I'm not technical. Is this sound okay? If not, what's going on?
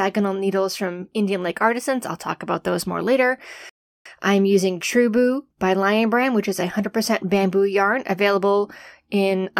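No. At 3.69 s, right after "about those more later", the speech halts in silence for about 0.36 s, then picks up at "I'm using". This is a rebuffering stall: playback ran out of downloaded audio and waited. Unlike a dropout, nothing is skipped; it simply resumes where it paused.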